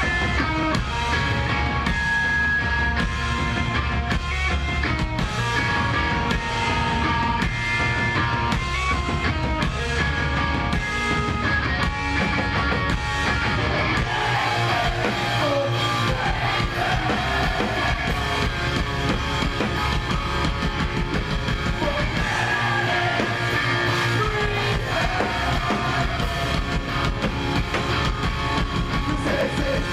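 At 0.63 s and again at 29.41 s there's a small jump forward, likely a dropped buffer (overrun), skipping roughly 20 ms and 10 ms of sound.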